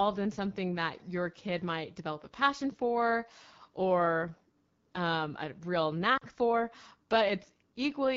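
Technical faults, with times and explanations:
Throughout, AMR wideband (HD Voice) codec: a low-rate AMR-WB mode, around 8.85 kbit/s, models speech coarsely, leaving it plainly rough and raspy.
6.17 to 6.23 s, lost AMR speech frames: after "um a real", about 40 ms of frames failed, so the decoder repeated old settings with falling gain, dropping the speech towards silence.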